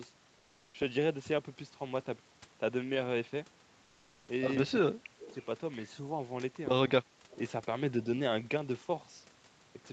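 Discontinuous transmission likely halted the sender in two pauses, so comfort noise in place of the background fills 0.38 to 0.74 s and 3.84 to 4.28 s: a smoother noise about 2 dB quieter. An echo leak from 5.19 to 5.45 s, likely from an echo canceller letting loudspeaker pickup through, adds a faint copy of the voice, roughly 20 dB down and delayed 202 ms. Within that span, speech suppressed in double talk, likely from the canceller turning both sides down, briefly dips the talker by around 5 dB for 50 ms, from 5.29 to 5.34 s, under the 8 kHz Opus bandwidth of the call.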